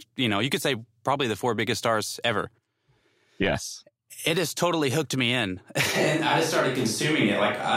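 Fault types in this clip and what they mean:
switch to a distant microphone: from 5.95 s to the end, the speech suddenly turns hollow, roomy and thinner at about the same level, likely because a far microphone replaced the close one.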